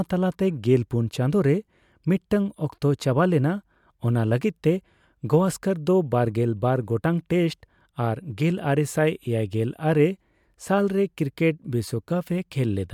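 Listening to this recording of speech, nothing technical stood out as a problem at any point.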